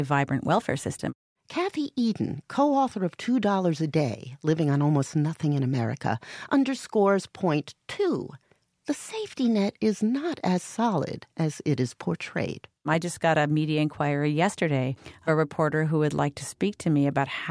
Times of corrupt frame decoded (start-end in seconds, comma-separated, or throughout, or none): none